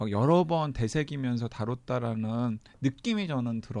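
There are no technical faults to describe at any point in the clip.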